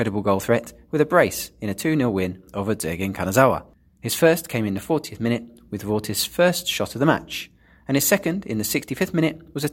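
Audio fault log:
No faults are audible anywhere in this speech.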